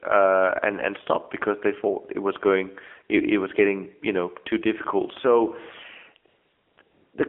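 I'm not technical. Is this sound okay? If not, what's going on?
No. The speech has passed through the AMR narrowband mobile codec, the old mobile-phone speech format. Everything above about 3.4 kHz is gone, so it sounds thin and muffled, and the heavy compression gives the voice a clearly buzzy, artificial edge.

Near the end there are two stretches of AMR comfort noise, from 6.28 to 6.78 s and from 6.82 to 7.14 s. During these the phone sent no sound. It decided nothing was being said, and the receiving end filled the gap with smooth, steady artificial hiss.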